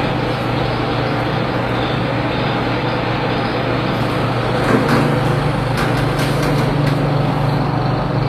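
Throughout, the treble sounds bright but synthetic and plainly damaged, with nothing above 14.9 kHz. This is likely HE-AAC compression, which fits a bitrate around 24 kbps: the upper band is rebuilt from copied lower bands, so its harmonics don't match.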